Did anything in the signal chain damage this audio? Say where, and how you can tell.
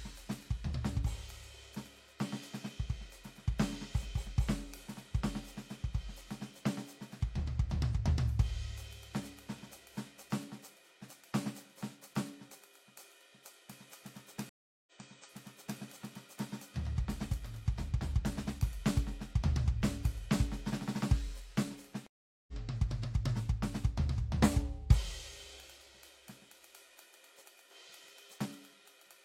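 Yes. The damage is at the network stage: two stream reconnects in the music. At 14.49 s the audio drops out for about 0.37 s, then resumes 0.93 s earlier than where it broke, replaying material already heard, until 15.80 s. At 22.07 s a 0.41 s gap is followed by a jump roughly 0.4 s ahead, ending at 22.53 s. In each case the connection failed, the player restarted a fresh decoder mid-stream, and the first frame comes back faded in.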